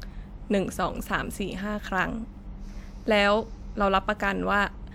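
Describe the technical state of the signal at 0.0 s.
At 0.0 s the speech signal is intact, with no audible technical fault at that moment.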